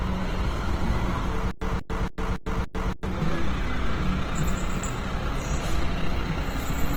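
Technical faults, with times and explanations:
Throughout, Opus compression: the sound is coarse and grainy, with tones turned noisy and rough rather than swirling, and content reaches about 20.2 kHz, with few bands hollowed out. This likely comes from Opus in its music mode at a low rate, around 16 kbps.
1.51 to 3.06 s, stutter with silent gaps: the same 180 ms burst plays five times, each followed by about 103 ms of digital silence, repeating every 283 ms. That steady return of one fragment, rather than random dropouts, points to a player that stalled and retried.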